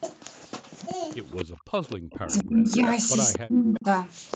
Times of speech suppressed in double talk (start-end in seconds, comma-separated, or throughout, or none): 1.63-2.84, 3.42-3.88